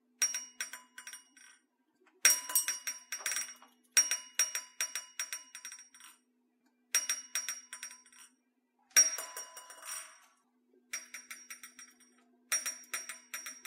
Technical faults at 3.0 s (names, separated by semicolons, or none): none